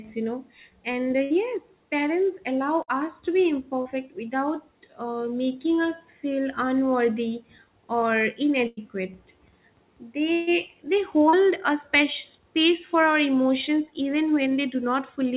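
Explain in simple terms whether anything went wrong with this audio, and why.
Several moments of this speech recording were lost in transit, as happens on an internet call.

At 1.24, 2.82, 8.67 and 10.33 seconds there is a burst of packet loss. Between about 60 and 140 ms of audio never arrived, and the longest gap is the one at 10.33. The receiver covered each hole by stretching out the last sound it had, so you hear a brief held buzz or fading hiss. The speech then jumps ahead, and that stretch of it is gone.

At 3.82 and 11.29 seconds there is short concealed packet loss. Only about 40 ms went missing each time. The patch is so brief that it comes across as a quick smear or wobble rather than a noticeable held sound, and it can swallow a small consonant. What sets it apart from the bursts is this shortness: nothing is drawn out long enough to hear as a buzz or hiss.

The whole call also sounds narrow and telephone-like, because the phone-style codec it went through carries nothing above 4 kHz.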